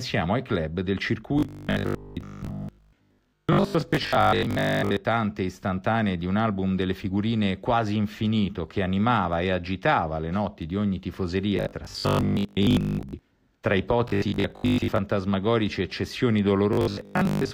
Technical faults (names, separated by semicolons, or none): robotic sound from repeated short buffers